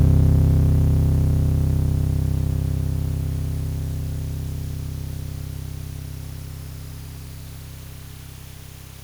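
Nothing in this music stood out as a technical problem on listening.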